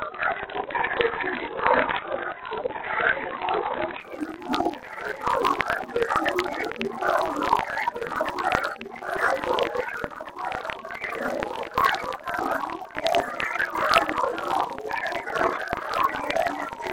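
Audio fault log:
0.0–4.0 s, adaptive stream starting at a low bitrate: the opening four seconds are dull and smeared, with nothing above 4.2 kHz and the codec artefacts stronger, which fits a very lean AAC stream somewhere around 16 kbit/s. The player grabbed that cheap version so playback could start straight away, then switched up once it had gauged the connection. At 4.0 s the treble snaps back and the audio cleans up with no gap, consistent with a step to roughly 96 kbit/s.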